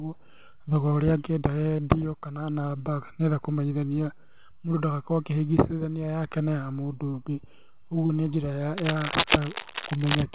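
Short concealed packet loss hits five times: 1.77 to 1.79 s, 4.14 to 4.17 s (between "enda kũmenyithania" and "mũndũ ndagakorwo akĩhĩngĩcithania yake"), 7.11 to 7.14 s, 8.06 to 8.10 s (just before "nĩ njĩra"), and 9.20 to 9.23 s. Each time 10 to 30 ms of the call arrived too late, and the receiver stretched the preceding sound over the hole. You hear a quick smear or wobble.

Right after "nĩ njĩra", from 8.77 to 10.23 s, there's cable scratch noise: ragged, rustly bursts about as loud as the speech, likely from a worn cable or connector being moved. The last dropout at 9.20 s lands inside this stretch. All of it sits in the narrow call band, with nothing above 4 kHz, which fits G.711 mu-law at 64 kbps.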